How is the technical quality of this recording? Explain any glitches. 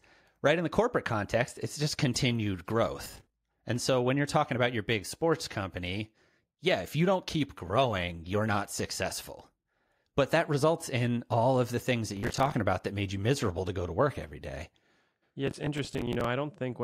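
The recording has three bursts of processor overload crackle. They occur at 3.05 to 3.34 s just after "context it's just continued", at 12.17 to 12.54 s between "of the things that" and "about that made you", and at 15.47 to 16.25 s. The processor misses many buffer deadlines in a row and replays stale audio in fragments of around 10 ms, so a gritty tearing rides over the speech. Unlike clipping, it doesn't follow loudness, and unlike a single dropout, it is a rapid chain of hard-edged repeats.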